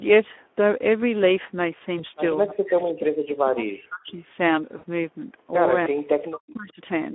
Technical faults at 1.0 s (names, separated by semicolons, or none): Speex codec